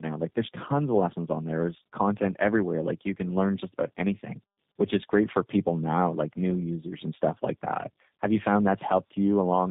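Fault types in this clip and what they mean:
tandem speech coding: the speech passed through two low-rate speech codecs in a row, AMR-NB and then G.729A, with a G.711 link between them, so each coder re-encoded audio the previous one had already degraded. It sounds rougher and more warbly than a single narrowband codec would, with nothing above 3.8 kHz. That stacked roughness and warble, beyond plain band-limiting, separates it from simple narrowband telephone filtering or one codec at low bitrate.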